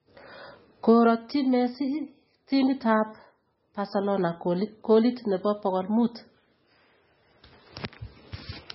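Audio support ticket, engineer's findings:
MP3 compression, throughout the speech. Band-limited, nothing above 5.6 kHz; heavy watery, swirling texture on sibilants. Likely a bit-starved MP3 encoder, consistent with about 18 kbps: treble cut at a fixed frequency, and weak spectral lines zeroed and flickering between frames.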